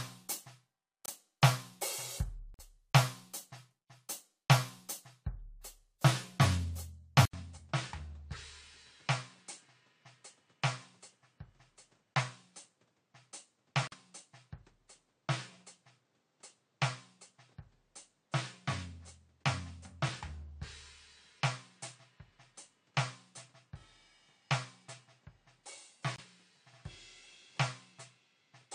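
Corrupt frame muted dropouts cut into the music at 1.05–1.11 s, 2.54–2.61 s, 13.87–13.94 s and 26.16–26.24 s, each an abrupt hole with no loss of timing, where damaged compressed frames were rejected by the decoder and replaced with silence, spans that fit two or three frames apiece. An input switched to a poorer device is the likely cause of the change at 7.25 s: after a gap of about 80 ms the sound returns about 10 dB quieter, with nothing above 9.6 kHz and a new noise floor roughly 35 dB below the music, and it stays that way to the end. A corrupt frame decoded at 8.34–8.36 s gives a short burst of misplaced energy, as a single frame with flipped bits was played anyway and its misread gains and codes landed at the wrong frequencies.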